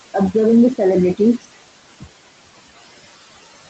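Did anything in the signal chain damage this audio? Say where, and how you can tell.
Yes. The room noise under this speech pumps: between phrases it drops by about 16 dB, then swells back under each syllable. That points to the call processing stage, where a noise suppressor applies frame-by-frame band gains that follow the speech.

The fade-out begins around 1.67 s and turns grainy. From 2.69 s to the end it is at its grittiest. This is truncation distortion on a fade in a gain or sample-format stage that drops low bits without dither, which fits roughly 10-bit resolution.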